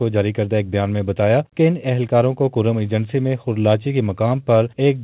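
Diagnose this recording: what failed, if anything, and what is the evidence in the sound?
Nothing failed: the only thing to hear is the call path itself, with nothing above 4 kHz, which fits narrowband G.711 mu-law at 64 kbps, and no stage shows a fault.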